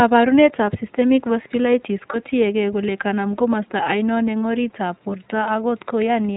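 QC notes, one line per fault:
throughout, iLBC codec: nothing above 4 kHz, with a plainly rough, slightly synthetic edge on the voice, which fits iLBC's 15.2 kbps, 20 ms frame mode rather than a smoother narrowband codec.
2.12–2.17 s, lost iLBC frames: after "systemic vasculitis", 20 ms of sound becomes a brief buzzy held vowel, not silence, as the decoder repeats the last pitch cycle, then "tiyekeey kole kanam komosta" returns almost at once.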